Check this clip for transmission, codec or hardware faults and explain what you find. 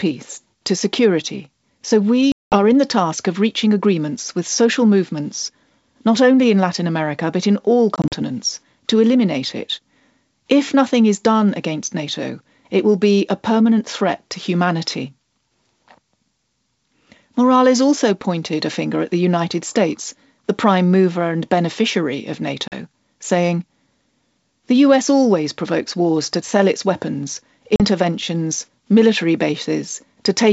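Packet loss on an ADPCM call is the fault here, heard four times over the wideband speech, which sounds like G.722 running at its full 64 kbit/s rate. At each event, lost packets were filled with silence. The decoder's adaptive predictor and step size then lost track of the sender's, so the speech comes back from each hard-edged gap slightly distorted, settling within some tens of milliseconds.

At 2.32 to 2.56 s, about 200 ms drops out in one hole, roughly ten packets' worth. At 7.96 to 8.16 s, 80 ms goes missing in scattered pieces across 160 ms, none longer than 40 ms. At 22.68 to 22.74 s and again at 27.76 to 27.82 s, single 40 ms gaps, a couple of packets each, are followed by the same brief mistracking.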